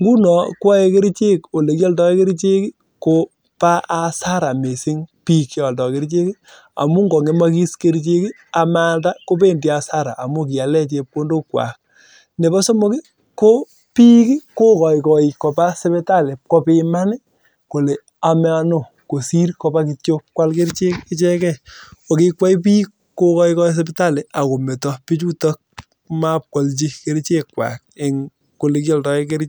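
Nothing here catches the ear at any point, so there's no fault in this speech recording to point to.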